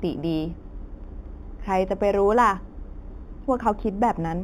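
From start to finish, this speech shows imaging from linear upsampling. The rate appears to have been raised, which fits a conversion from 8 kHz to 44.1 kHz, by joining samples with straight lines. That acts as a weak filter, so the top of the original band is dulled and a mirrored copy of the spectrum survives between 4 kHz and 8 kHz, roughly 35 dB below the signal. It is heard as a faint metallic shimmer on sibilants.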